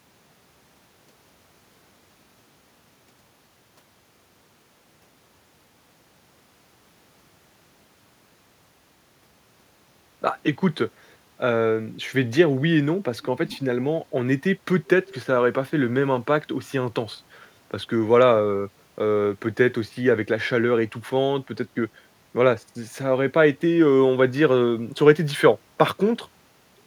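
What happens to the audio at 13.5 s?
From 13.47 to 13.59 s an echo leak comes through: a faint, delayed copy of the speech, lagging by about 0.44 s and sitting roughly 20 dB under the direct voice. It is likely caused by the far end's loudspeaker being picked up by its microphone, with the echo canceller letting a short scrap slip back. On a spectrogram it appears as a weak repeat of the earlier harmonic pattern; the waveform shows only a small added ripple.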